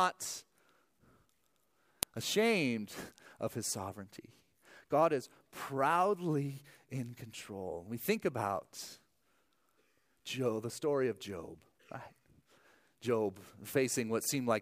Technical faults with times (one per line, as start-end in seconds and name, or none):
2.03 file header played as audio